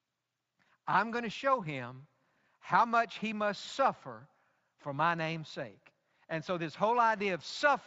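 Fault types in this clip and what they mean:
Nothing here counts as a fault; the speech comes through the Speex path at its ordinary, light level of coding.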